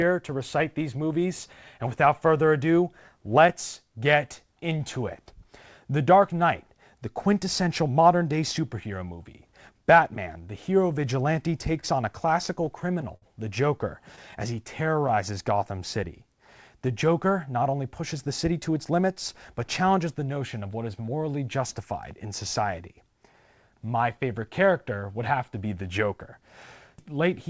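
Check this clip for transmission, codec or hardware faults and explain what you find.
Four faults are audible in this speech clip, all from network timing. The sound is band-limited with nothing above 8 kHz, which fits a G.722 call path at 64 kbps.

Repeated stalls (stutter) run from 11.80 to 13.24 s. Packets arrived late or too slowly, and the jitter buffer kept running dry. Each time, the receiver stretched the last sound until new audio came. There are seven such stalls, totalling 132 ms. The longest is 56 ms. Nothing is lost. The speech drags and stutters through this stretch.

Scattered short gaps fall between 14.16 and 15.11 s. A few isolated packets went missing or came late. The receiver covered each small hole by continuing the previous sound. The holes are tiny, about 10 ms at most. Together they fill only a small share of the span. No audio is lost. What you hear are brief ticks and small hiccups in otherwise clear speech.

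A jitter buffer slow-down overlaps this, from 14.51 to 15.80 s. The buffer was short of audio and needed a reserve. So the receiver repeated single pitch periods and bits of pauses, over and over. That added 81 ms. Playback runs at 94 percent speed. The pitch stays the same. Sounds are drawn out, and the speech feels slightly sluggish here.

A jitter buffer speed-up runs from 17.73 to 20.19 s. Here the buffer held more audio than its target, as happens when delayed packets arrive in a burst. To cut the delay, the receiver removed short pieces one or a few pitch periods long, many times in a row. About 150 ms disappears. Playback runs at 105 percent speed with unchanged pitch. The speech sounds a little hurried.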